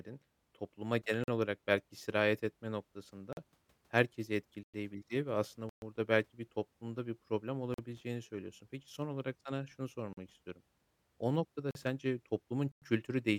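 Eight blocks of digital silence interrupt the speech. Short 43 ms holes fall at 1.24 s (just after "topluma genel"), 3.33 s, 7.74 s, 10.13 s and 11.71 s. Longer gaps of about 104 ms, 128 ms and 103 ms begin at 4.63 s, 5.69 s and 12.72 s. Each time, the output buffer likely went unfilled and its samples were zeroed. The 43 ms length fits a 2048-sample buffer. Every dropout cuts in and out with no fade.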